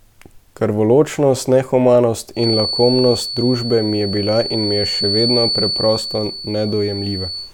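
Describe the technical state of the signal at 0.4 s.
At 0.4 s the speech signal is intact, with no audible technical fault at that moment.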